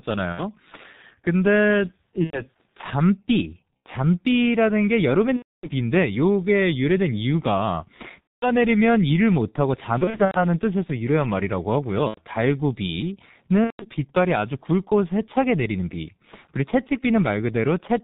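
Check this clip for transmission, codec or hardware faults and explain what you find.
Two faults are audible: the speech runs through the G.723.1 codec for the whole clip, and VoIP packet loss concealed by the speech codec breaks in eight times.

G.723.1 codec, throughout: the low-rate telephony coder works in 30 ms frames and its voice model adapts slowly, which fits a rate near 6.3 kbit/s. The damage here is heavy. Nothing above 4 kHz survives, so the speech sounds muffled and hoarse, and consonants smear into one another instead of landing crisply.

VoIP packet loss concealed by the speech codec, at 0.32–0.41 s, 2.24–2.41 s, 3.79–3.83 s, 5.36–5.69 s, 8.22–8.48 s, 9.98–10.41 s, 12.08–12.21 s and 13.64–13.87 s: packets went missing, and the decoder filled each gap by repeating its last pitch and filter while lowering the gain frame by frame. The speech stretches into a fading buzzy tone or coloured noise. 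The longest gaps are at 5.36 s and 8.22 s. Around 10 s the losses are scattered across about a third of a second. Because each frame builds on the one before, the speech stays weak or distorted briefly after packets resume.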